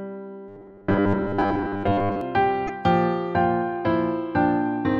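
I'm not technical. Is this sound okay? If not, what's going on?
No. From 0.48 to 2.21 s there is robotic sound from repeated short buffers. New audio likely arrived too slowly, so the system kept replaying a tiny slice of roughly 10 ms in place of most of the real sound. That looping imposes a steady 100 Hz buzz, making the passage metallic and mechanical.

From 2.67 to 2.70 s there is a corrupt frame decoded. A single compressed chunk of the audio was damaged, but the player used it anyway and put sound at the wrong pitches. You hear it as a brief chirp, squeak, blip or burst of noise.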